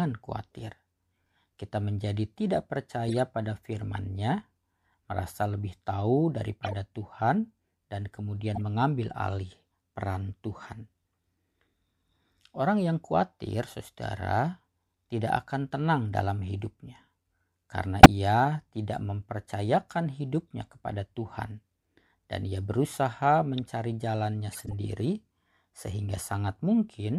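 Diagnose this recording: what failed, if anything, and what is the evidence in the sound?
The failure is in the codec stage. The decoder played corrupt frames. Five short bursts break into the speech: 3.08 to 3.19 s, 6.63 to 6.73 s, 8.55 to 8.59 s, 18.03 to 18.06 s and 24.52 to 24.73 s. Each lasts a few frames, which fits damaged compressed data. Flipped bits gave wrong gains and misread codes, so energy landed at the wrong frequencies. Most bursts peak around -20 to -25 dBFS. The one at 18.03 s is the loudest.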